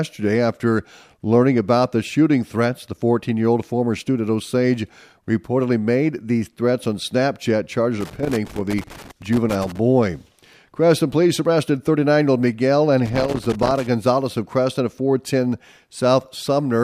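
Speech, interrupted twice by loose connector crackle: an irregular burst of scratching from 8.01 to 9.78 s, and a shorter one from 13.05 to 13.87 s. The sound comes from a worn or dirty contact somewhere in the signal path that makes and breaks as it moves, so the audio is chopped on and off many times in quick succession. The two separate bursts suggest the connector was disturbed twice.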